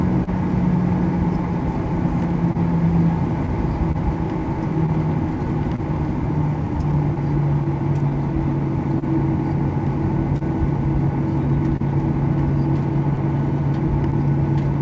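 The sender's audio clock runs a couple of percent slower than the receiver's, so the jitter buffer keeps draining and the receiver has to stretch or repeat small pieces. This clock drift between sender and receiver leaves small, unevenly spaced timing hiccups across the whole clip. Three times a packet arrived late and the buffer ran dry, causing a short stall from a late packet. The last sound was held for about 30 ms from 0.24 to 0.30 s, about 28 ms from 10.38 to 10.44 s, and about 30 ms from 11.77 to 11.83 s. Each one is heard as a brief sustained smear with a slight buzz or dip before the audio picks up where it left off. Scattered short gaps, from packets lost or late one at a time, were patched by continuing the previous sound. There are about seven between 1.63 and 5.81 s, about four between 7.15 and 9.05 s, and about three between 13.16 and 14.15 s. Most are a few tens of milliseconds or less, and they come through as small ticks and momentary smears. 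All of this passes through a G.722 call codec, consistent with 64 kbps, which leaves nothing above 8 kHz.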